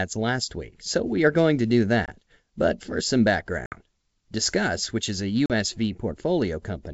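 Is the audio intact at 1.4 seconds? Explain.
Yes, the speech is intact at 1.4 seconds, with nothing there beyond the faint upper-band hiss of G.722 wideband telephone coding.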